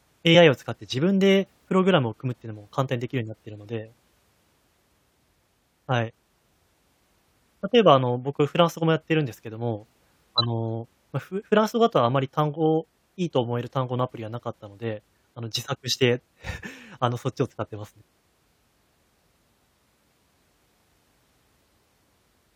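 Whole compressed frames went unplayed near the start of this speech recording: at 0.34 s, missing or rejected frames make the audio jump ahead by about 20 ms. Later, a corrupt frame was decoded: from 10.38 to 10.46 s, a few frames with flipped bits were played anyway. Misread gains and codes push energy to the wrong frequencies for about the length of each damaged frame.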